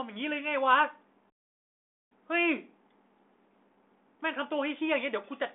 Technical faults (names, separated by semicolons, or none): playback stall